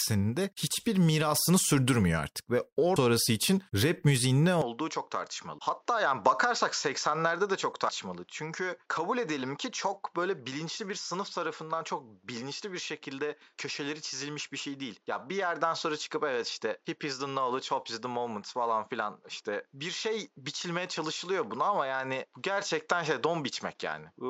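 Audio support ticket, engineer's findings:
Compressed frames skipped at 2.96 s, between "mirasını sürdürmüyor artık ve" and "için rap müziğin ne". The decoder or file lost around ten consecutive 32 ms frames, so the speech jumps forward by roughly 0.4 s. The skipped stretch is simply absent.

Input switched to a poorer device, likely mid-recording, at 4.62 s, just after "için rap müziğin ne", and it persists to the end. There is no gap at the changeover. The new path passes nothing above 7.6 kHz, so the speech turns duller and boxier. Level drops by about 5 dB, and a fresh noise floor appears around 45 dB below the speech.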